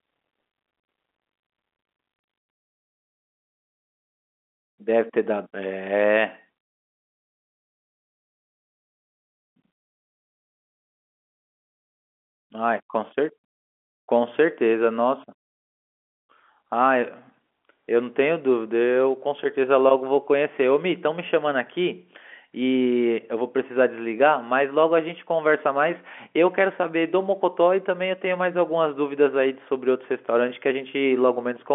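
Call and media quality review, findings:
No findings for this call and media quality review: the speech carries ordinary G.711 telephone coding with nothing above about 3.7 kHz, and there is nothing to report.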